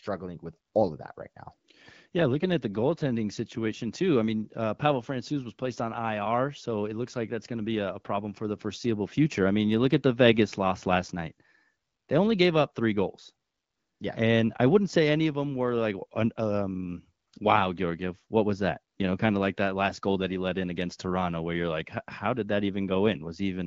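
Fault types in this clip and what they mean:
No fault types are present in this clip, so there is nothing to explain.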